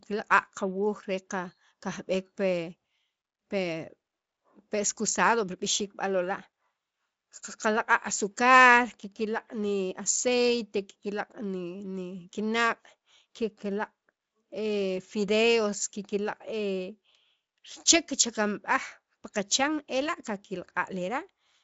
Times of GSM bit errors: none

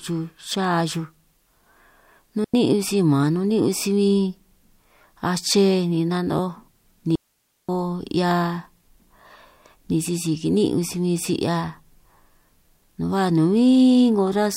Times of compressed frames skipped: none

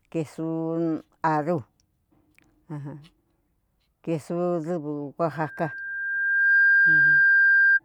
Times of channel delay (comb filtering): none

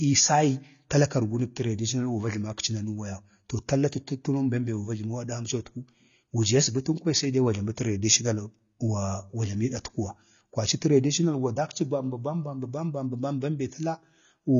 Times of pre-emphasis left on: none

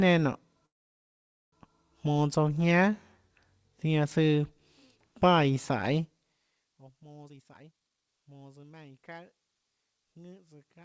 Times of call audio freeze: 0.66-1.54

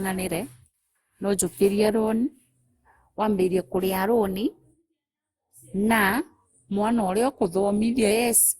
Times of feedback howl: none

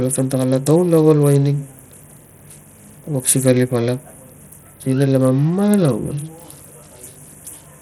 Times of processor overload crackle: none

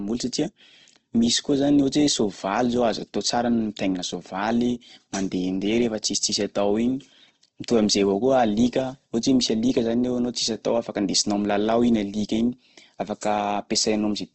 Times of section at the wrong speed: none

